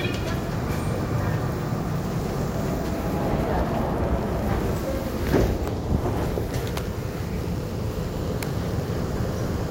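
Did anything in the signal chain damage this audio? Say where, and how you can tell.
Yes: a train of clicks runs from 1.98 s to 9.68 s, about 13.4 per second at an uneven pace, around a hundred in all. Each has much the same shape and peaks roughly as loud as the sound itself, ticking through quiet moments too. Such repeated, near-identical pulses point to something injecting energy into the chain, likely interference coupling into the analogue wiring or a faulty connection or power supply.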